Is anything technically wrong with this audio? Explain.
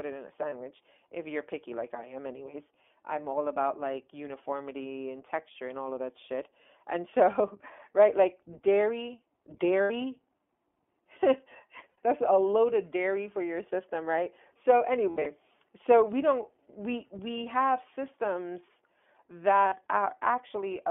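Yes, two problems. The whole clip has gone through the iLBC codec, and a handful of frames got dropped along the way.

The iLBC codec damage is plainly audible throughout. The band is squeezed to roughly 250 Hz to 3.4 kHz, which sounds like a phone line. iLBC codes each frame's excitation on its own, with no help from the previous frame, so the speech comes out a bit rough and synthetic. The character fits the 15.2 kbps mode with 20 ms frames.

You also get lost iLBC frames at five spots. The first is at 0.50 s, a 20 ms gap between "it in a" and "if you're picky like". The next is at 9.82 s, 80 ms right after "right like dairy". Another 80 ms goes at 11.90 s. From 15.10 to 15.27 s the losses are scattered over about 160 ms, with the longest run around 70 ms, just before "so we don't we". The last is 40 ms at 19.68 s. At each one the decoder repeats the last pitch cycle mixed with noise, so you hear a brief held, buzzy vowel. 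Because each frame stands alone, the voice snaps back almost immediately afterwards.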